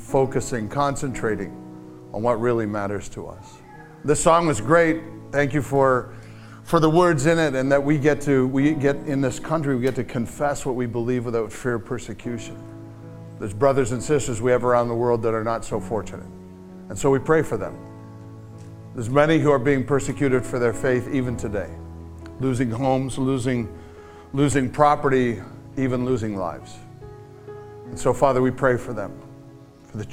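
Nothing jumps out here at all; there are no technical faults to flag anywhere in this clip.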